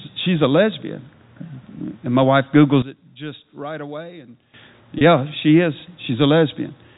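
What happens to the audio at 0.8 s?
Nothing goes wrong at 0.8 s: the speech carries on intact through that moment, heard only through its ordinary G.711 telephone-band coding.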